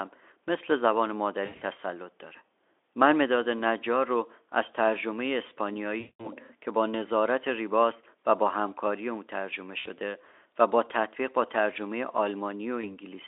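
At 1.45 to 1.63 s, 5.99 to 6.29 s, 9.79 to 9.87 s and 12.82 to 12.86 s, VoIP packet loss concealed by the speech codec stretches the last sound into a fading buzz while the Speex decoder, coding a 300 to 3500 Hz line band, fills gaps of 140, 200, 60 and 20 ms. The first is scattered, its longest run 80 ms. Spectrograms show frozen, smeared harmonics decaying; waveforms show repeated, shrinking cycles.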